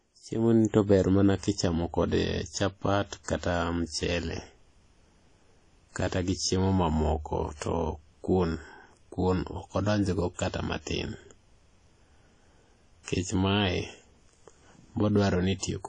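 A transform codec running at a low rate has likely processed this speech clip as WMA compression. Long blocks spread quantisation noise across tens of milliseconds, weak spectral lines are zeroed, and the plainly audible damage fits a bitrate around 32 kbps. The result is a ringing, washy quality with a hiss that swells and fades with the speech, and nothing remains above 10 kHz, so the top end sounds dull. The same block coding causes pre-echo twice. Noise sized for a sharp attack late in a block also fills the quiet gap before it. From 3.24 to 3.28 s, just after "mana kichamo kode chapat", a short hiss about 47 ms long runs ahead of the onset. From 7.56 to 7.61 s, after "gi chiemo mamoko", a similar smear lasts about 56 ms. Both attacks sound soft and blurred instead of crisp.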